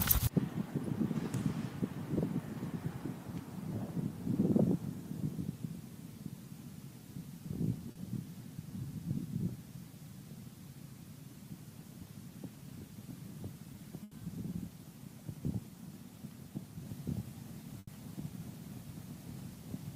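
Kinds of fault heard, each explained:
Short concealed packet loss: at 7.91 s about 40 ms of audio never arrived in time, and the receiver bridged the hole by extending the last sound, carrying its pitch forward where it was voiced or substituting shaped noise where it was not, then crossfading back into the real signal. The result is a brief smear or wobble of about 40 ms where a short sound can drop out entirely.
Burst of packet loss: at 14.03 s and again at 17.79 s, roughly 80 ms of audio went missing in one run each time. The receiver stretched the last sound across the gap while fading it down, so a voiced sound turns into a held buzz and anything else into a dying hiss. Playback then picks up further along, with those 80 ms gone.
Doubled audio track: from 16.86 s to the end, a second full-band copy of the audio plays about one and a half seconds behind the original at roughly the same level. 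It has no decay or room colour, which sets it apart from an echo, and it starts abruptly. The likely cause is the signal being captured a second time through a slower path, or an edit leaving two out-of-step copies in the mix.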